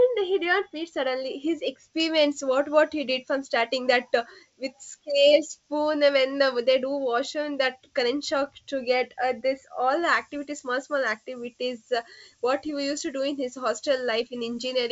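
From the start to 2.0 s the speech sounds dull and muffled, its upper range smoothly rolled off. This is de-emphasis applied wrongly: a treble cut meant to undo pre-emphasis hit audio that had none or was applied twice, tilting the response down, about 11 dB at 10 kHz relative to 1 kHz.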